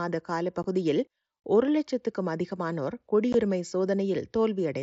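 At 0.63 s and 3.33 s, packets between headset and phone were dropped without concealment. This unconcealed Bluetooth headset packet loss cuts abrupt, roughly 15 ms silent holes into the wideband mSBC speech.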